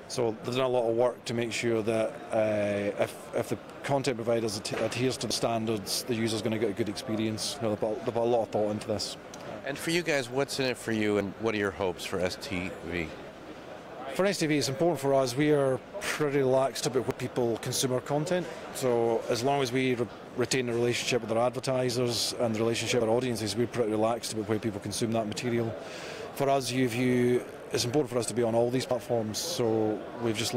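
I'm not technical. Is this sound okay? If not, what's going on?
No. There is audio missing between chunks at 5.31, 17.11, 23.01 and 28.91 seconds: brief skips where about a tenth of a second vanishes. The likely cause is a recorder saving in roughly six-second pieces and dropping a sliver at each handover.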